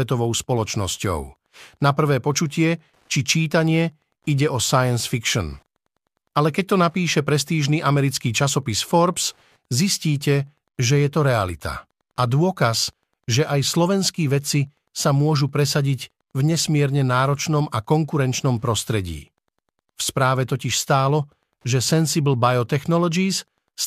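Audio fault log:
throughout Wi-Fi interference: a steady ticking runs under the speech for the whole clip, repeating every 102.4 ms, just under ten times a second, and sitting roughly 50 dB below the speech. A nearby Wi-Fi radio is transmitting its regular beacon, and the audio circuitry rectifies each short burst of radio energy into a small click, so the ticks follow the radio's fixed timing and are unrelated to anything in the sound itself.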